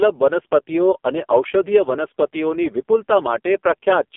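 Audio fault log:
Throughout: AMR narrowband mobile codec. The speech is squeezed into a line band of 250 Hz to 3.5 kHz, with nothing above 3.5 kHz, and the codec damage is heavy, giving a buzzy, synthetic voice that fits one of the lowest AMR-NB modes, around 5 kbps. A simple telephone-band filter would only sound muffled. This codec rebuilds the voice from a vocal-tract model and a few pulses in each 5 ms, and at so few bits that model becomes audible as a mechanical buzz.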